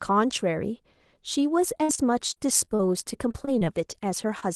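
From 1.77 to 2.81 s there is repeated packet loss, heard as robotic sound. Audio arrives late or not at all, again and again. Each hole is bridged by stretching the last sound. The longest is 58 ms. About a fifth of the stretch is patched, so the speech turns choppy.

From 3.31 to 3.68 s the same fault returns. The holes are shorter here, 22 ms at most. About a fifth of this span is again filled in.

At 4.40 s there is a short concealed packet loss. About 20 ms went missing. The decoder continued the preceding sound and blended back in, leaving a brief smear or wobble.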